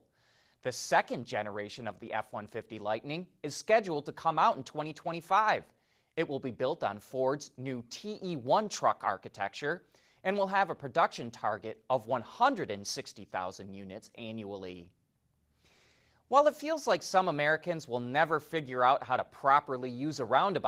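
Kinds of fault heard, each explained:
No faults heard in this recording.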